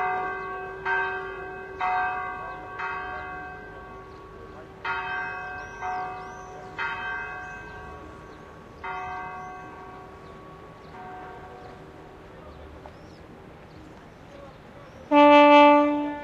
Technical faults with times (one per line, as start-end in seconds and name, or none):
none